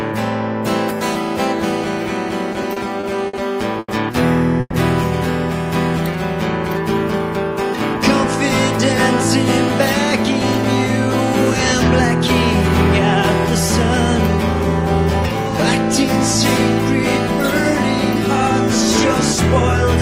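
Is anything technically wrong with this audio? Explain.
Yes, there are three network-delay faults, all early in the clip.

From 2.53 to 3.35 s there are repeated stalls (stutter). Late packets emptied the jitter buffer five times, and each gap of up to 60 ms was filled by repeating the last sound. The audio drags, and a spectrogram shows smeared, repeated frames.

From 3.79 to 3.90 s there is a short stall from a late packet. One packet arrived 90 ms late, so the last sound was stretched to cover the wait. On a spectrogram, a held, flat harmonic band fills the gap.

From 4.60 to 4.75 s there is a call audio freeze, likely from packets held up in transit. About 130 ms is filled with a fading buzz that ends in 20 ms of silence. The waveform shows a decaying envelope that drops to a flat line.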